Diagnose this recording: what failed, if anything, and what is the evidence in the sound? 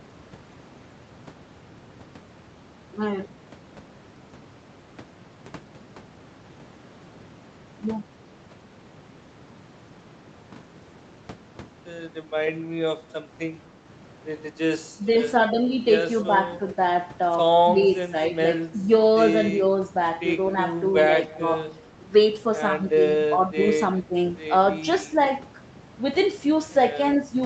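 Speech suppressed in double talk at 14.96–15.13, 17.7–18.14, 18.32–18.37, 18.72–18.88, 21.26–21.51, 23.28–23.6 and 24.07–24.16 s: the speech dips by about 10 dB (about 5 dB at 23.28 s). In the call processing stage, the echo canceller likely turned down the near talker while the far side was talking.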